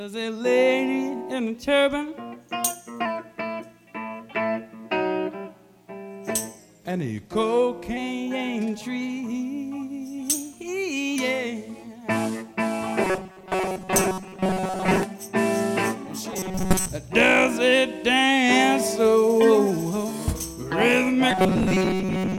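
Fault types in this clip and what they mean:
Drift correction step: playback briefly runs 6.25% fast or slow, likely clock-matching; spectrogram harmonics jump about a semitone (105 or 112 cents) together, then snap back.
Robotic sound from repeated short buffers: a rigid 188 Hz buzz, likely from repeating a roughly 5.3 ms buffer; waveform shows identical cycles, spectrogram a fixed 188 Hz comb.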